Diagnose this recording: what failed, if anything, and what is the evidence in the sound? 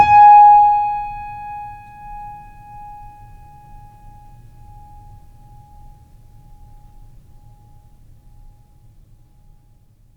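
The music carries a slapback-like second copy of itself roughly a third of a second behind throughout, a few dB quieter, full-band and dry with no decay or room colour. This doubled audio track is likely a second, slower capture path or editing error mixing the same material in twice.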